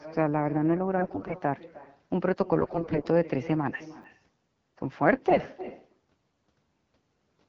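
A speech recording carried over AMR wideband (HD Voice), with light codec colouring. An echo with no canceller runs throughout. Every phrase returns about a third of a second later, about 18 dB quieter, because the far end's loudspeaker feeds its microphone unremoved. AMR bit errors hit from 0.97 to 1.36 s, 2.59 to 3.02 s and 5.30 to 5.46 s. Roughly one bit in ten flipped in the weaker-protected bits, less in the last burst, so the voice turns hoarse and gargly. Chunks out of order appear at 4.02 to 4.04 s. A 10 ms chunk plays one slot late, causing a brief jumbled moment with hard joins.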